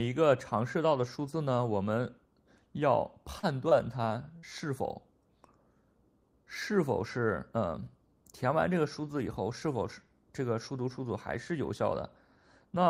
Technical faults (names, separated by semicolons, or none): short concealed packet loss